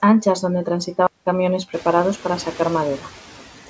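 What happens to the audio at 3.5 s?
Noise suppressor artifacts are present at 3.5 s, as they are across the whole clip. The suppressor cuts what it judges to be steady noise by about 8 dB, frame by frame. The room noise, louder since around a second and a half and sitting about 20 dB under the speech, dips between phrases and swells back beneath them. The G.722 path also leaves nothing above 8 kHz.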